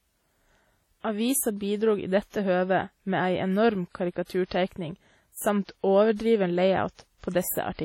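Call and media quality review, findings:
Low-bitrate audio saved at a high bitrate, throughout: nothing above 16.7 kHz, smeared coding artefacts. Likely a very low-bitrate first encode, re-saved as high-bitrate MP3; losses not restored.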